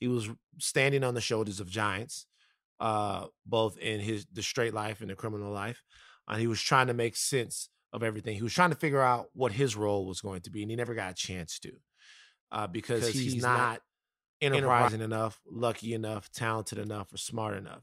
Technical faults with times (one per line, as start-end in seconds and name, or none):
12.93-14.89 doubled audio track